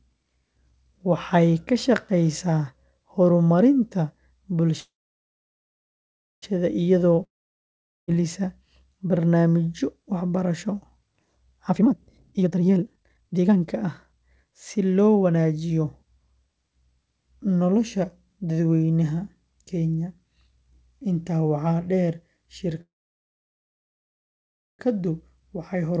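Call audio freezes at 4.80–6.44 s and 22.81–24.81 s interrupt this speech recording. At each, the last sound trails off as a fading buzz into silence of about 1.5 s and 1.9 s respectively. Speech then resumes exactly where it stopped, with nothing skipped, so each freeze inserts a gap of about 1.6 s and 2.0 s. The likely cause is packets held up in transit, leaving the jitter buffer empty until they arrived. A long network dropout at 7.24–8.10 s sounds similar at first: a brief fading buzz, then about 0.79 s of silence. Here, though, the speech returns further along, with about 0.84 s of it gone for good, most likely because that audio never reached the receiver at all. Jitter buffer speed-up runs from 11.67 to 15.53 s, where the speech plays at 142% of normal rate but keeps its pitch, sounding noticeably rushed. The receiver repeatedly cut out short pitch-period slices, roughly 1.5 s in total, to drain a backlog of late packets that arrived together. 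A much milder speed-up at 25.40–25.98 s, at 105%, trims only a few tens of milliseconds. Throughout, nothing is heard above 8 kHz, which fits the wideband G.722 call codec at 64 kbps.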